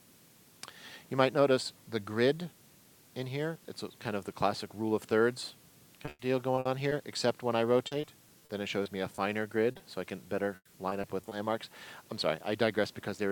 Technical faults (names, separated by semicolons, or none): low bit depth with dither; repeated packet loss (robotic sound); short concealed packet loss